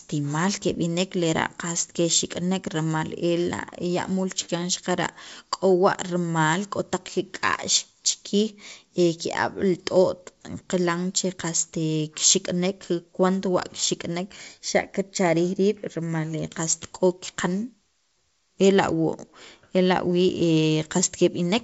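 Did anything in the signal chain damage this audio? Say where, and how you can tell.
No, no damage anywhere.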